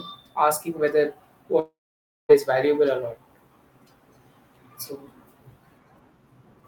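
From 1.59 s to 2.31 s the speech breaks off in what sounds like a long network dropout. The last sound is drawn out into a fading buzz, then about 0.55 s of near-silence follows before speech resumes, with 0.70 s of material gone rather than delayed. The connection likely stalled for too long for concealment to cover it. Unlike a short packet loss, the smeared tail dies away completely and the missing section never returns.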